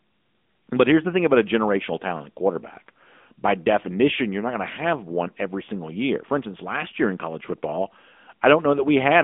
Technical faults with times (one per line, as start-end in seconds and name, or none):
0.00-9.23 AMR narrowband mobile codec